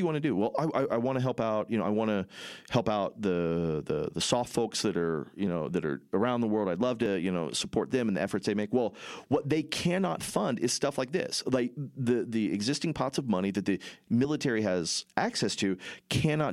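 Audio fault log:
5.47 s, 7.06 s and 14.25 s, dropped buffer (overrun): each time the speech lurches forward, as if a sliver of around 10 ms had been cut out and the two edges spliced together. The likely cause is a capture overrun, where the hardware overwrote samples before the program collected them. Unlike an underrun or a dropout, there is no gap of silence. The sound simply skips ahead.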